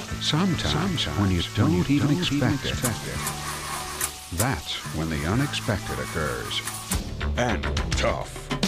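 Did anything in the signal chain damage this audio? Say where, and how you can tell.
Yes. From 0.48 s to 4.10 s the audio is a doubled audio track. A second full-band copy trails the original by roughly 400 ms, about 5 dB quieter. It has no decay and no room colour, so it is not an acoustic echo. It starts and stops abruptly at those two times. The likely cause is a capture or routing fault at the driver or buffer stage, where a slower second path recorded the same signal again.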